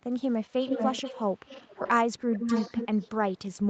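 An echo leak, likely from a far-end loudspeaker whose echo canceller passed its microphone pickup back, layers a copy of this speech 435 ms late at 0.62–1.24 s (as loud as the original), 1.45–1.91 s (faint) and 2.31–3.34 s (slightly quieter).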